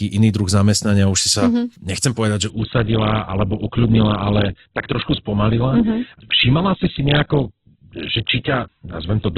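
At 2.50 s the speech changes abruptly and stays that way until the end. This is an adaptive stream at a lower bitrate. The connection slowed, and the player moved to a lower-quality version of the stream without leaving a gap. From that point nothing is heard above 4.2 kHz, so the speech loses its treble and sounds muffled. The coding artefacts grow more obvious. The change fits a switch from about 64 kbit/s Opus to about 8 kbit/s.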